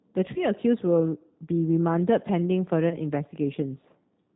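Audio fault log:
Throughout: G.729 codec damage, plainly audible. The speech is rebuilt at 8 kbit/s from a vocal tract filter, a pitch predictor and a handful of pulses per frame, so it comes out a bit rough and synthetic, with nothing left above 4 kHz.
0.34 to 0.51 s and 2.89 to 2.99 s: VoIP packet loss concealed by the speech codec. About 20 ms of audio went missing each time, which fits a single lost packet. The decoder guessed onward from its last pitch and filter and faded it, giving a brief buzzy or noisy smear, and the sound stays weak a little longer while it recovers.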